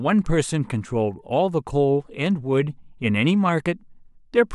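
At 2.26 s a single sharp click cuts through the speech, a brief tick rather than any gap in the sound. The likely cause is dropped samples: a fraction of a millisecond missing from the stream, so the waveform jumps abruptly to a later value.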